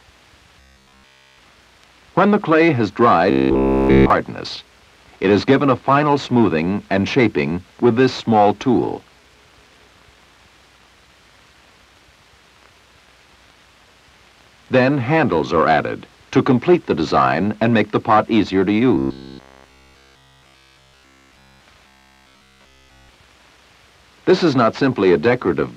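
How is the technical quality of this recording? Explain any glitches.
The recording has a recurring robotic sound from repeated short buffers, at 0.60–1.38 s, 3.31–4.10 s, 18.95–21.61 s and 21.87–23.10 s. A rigid 66.7 Hz buzz replaces the sound. It is likely caused by a 15 ms slice looping while nearly all the real audio is skipped.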